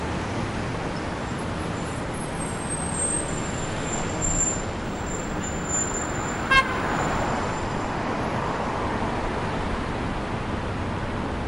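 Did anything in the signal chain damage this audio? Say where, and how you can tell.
Yes. Video or display buzz enters at the analogue wiring stage from 4.84 to 7.26 s. A nearby screen or video cable couples a 50 Hz field-rate buzz with hash above it, roughly 35 dB below the sound, plus a 15.6 kHz line-rate whistle. That whistle and the spiky texture distinguish it from smooth mains hum.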